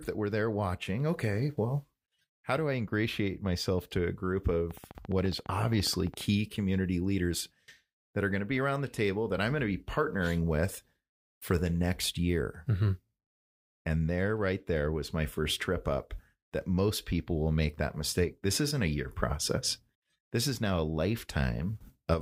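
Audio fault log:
4.71–6.22 s, train of clicks: likely interference or a faulty connection injecting near-identical pulses at a regular 14.7 per second, giving about twenty sharp ticks that poke above the speech.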